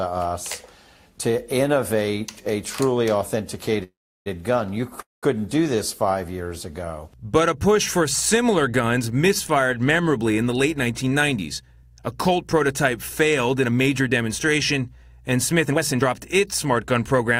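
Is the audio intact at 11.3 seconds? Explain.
No. At 11.3 s the clip is inside a jitter buffer speed-up running from 10.49 to 14.00 s. The receiver drained excess buffered audio by repeatedly cutting short pitch-period slices, playing about 6% fast at unchanged pitch and shedding roughly a fifth of a second. On a spectrogram the harmonics stay level while events crowd closer; the waveform shows periodic cycles missing.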